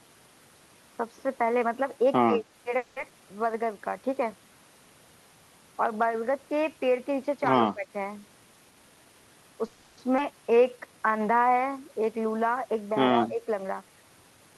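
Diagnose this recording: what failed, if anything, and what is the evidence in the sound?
The speech dips sharply three times, by about 15 dB at 2.26–2.43 s and 7.73–7.86 s and by about 10 dB at 13.28–13.46 s, each lasting a fraction of a second. This is speech suppressed in double talk in the call processing stage, most likely an echo canceller that could not separate the talker from loudspeaker echo while both sides spoke, so it attenuated everything.

At 2.77–2.98 s and again at 9.66–9.99 s the sound hangs on a fading, buzzy continuation of the last sound for 190 ms and 310 ms, then resumes where it stopped with nothing lost. This call audio freeze points to packets held up on the network. The jitter buffer ran dry, and the receiver concealed the wait by extrapolating until delivery resumed.

Playback jumps abruptly forward at 3.10–3.13 s and 10.17–10.20 s. Roughly 70 ms and then around 150 ms of speech is missing, and the two edges are spliced almost directly. 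This skip ahead happens in the network or jitter buffer, where audio was discarded, late or through overflow, while later packets were already queued.

Speech drags at unchanged pitch from 3.52 to 3.90 s, at 91% speed, and from 10.51 to 11.44 s, at 86%, with sounds stretched. This is jitter buffer slow-down. The receiver repeated pitch periods to rebuild its reserve, adding 42 ms and 136 ms after the freezes.

The talker sounds hurried at normal pitch from 8.71 to 9.64 s, at 118% speed, and from 13.63 to 14.54 s, at 113%. This is jitter buffer speed-up. With excess audio queued, the receiver trimmed short pitch-period segments, about 150 ms in each stretch, to pull latency back toward its target.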